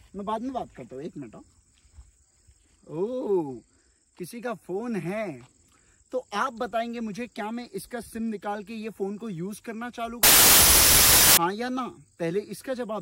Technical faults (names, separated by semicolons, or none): wrong sample width